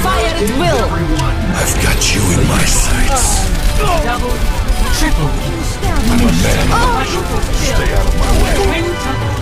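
Audio missing between chunks at 4.47 and 7.42 s: two abrupt skips, each losing about 50 ms, likely where a recorder working in 3-second chunks dropped audio at each boundary.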